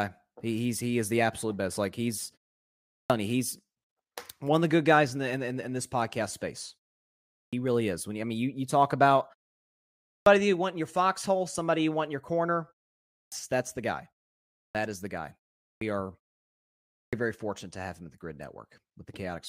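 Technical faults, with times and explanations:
2.86, 7.29, 10.03, 13.11, 14.54, 15.61 and 16.9 s, clipped start after a pause: the output path sleeps during each silence of 0.3 to 0.78 s and needs about 0.2 to 0.24 s to wake and lock again, so that much of the next sound is swallowed. Speech resumes abruptly without its opening sounds, as at "you he's", after "is the guy", and at "very fortunate to have".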